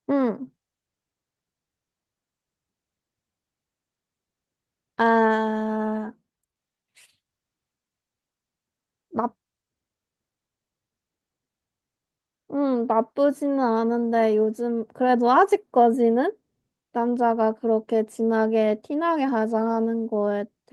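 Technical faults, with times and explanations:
No technical faults can be heard anywhere in the speech recording, which holds steady in level and continuity across its whole course.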